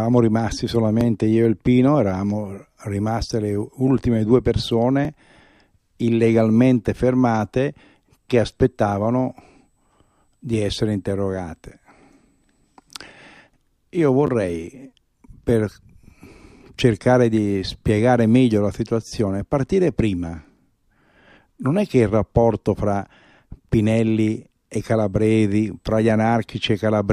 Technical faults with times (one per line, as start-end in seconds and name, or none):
1.01 repeated buffer
5.05 repeated buffer
14.27-14.29 repeated buffer
19.08-19.11 repeated buffer